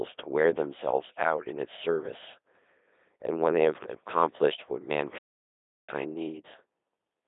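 From the start, the speech passes through a Codec 2 vocoder, which sends only pitch, voicing, energy and a coarse spectral envelope. The decoder rebuilds the voice from sine waves, so it sounds robotic and buzzy, with heavy damage that fits the 2.4 kbit/s mode. A spectrogram shows smeared harmonic stacks confined to roughly 300 Hz to 3.7 kHz, and nothing at all above 3.8 kHz.

At 5.18 s the sound cuts off mid-flow, and the output is silent until 5.89 s, a gap of about 0.7 s. This playback stall was likely caused by the player running out of data or its thread being blocked. On the waveform it appears as a flat line, and the spectrogram shows a blank vertical band.

From 5.89 s to the end, a time-compressed catch-up runs the audio at 1.15 times normal speed while keeping the pitch unchanged. Small pieces are cut out and cross-faded to shrink the backlog, so the speech sounds hurried. Syllables sit closer together on the waveform, and the harmonic lines show discontinuities.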